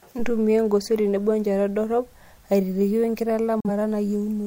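Speech that cuts abruptly to silence from 3.60 to 3.69 s, via a 3 ms fade: a digital broadcast dropout. The receiver muted on bad data, losing 42.7 ms, which fits a single lost frame.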